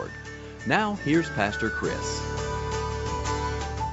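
The audio shows no technical faults; its content stops at about 8 kHz, which fits a wideband call codec such as Opus after normal call microphone processing.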